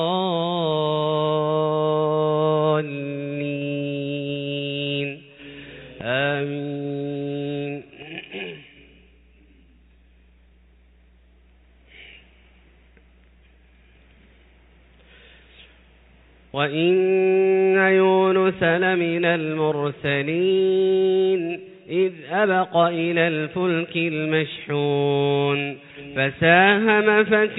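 No technical fault can be heard anywhere in this audio. Nothing in it calls for a time, a cause or a repair.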